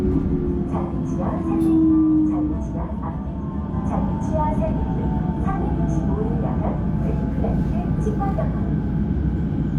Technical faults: AAC frame loss with concealment

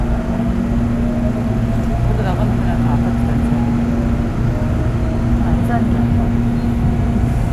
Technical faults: none

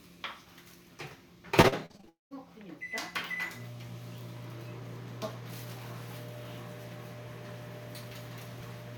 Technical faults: repeated packet loss (robotic sound); long network dropout

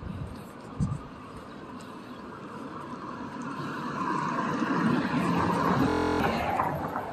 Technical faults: system hang loop

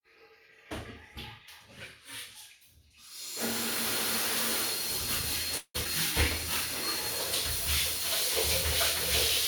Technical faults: call audio freeze; skip ahead

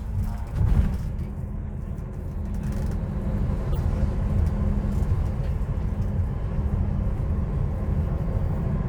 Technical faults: corrupt frame decoded

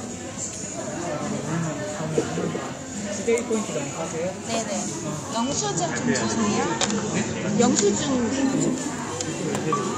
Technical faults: digital radio blending to analogue

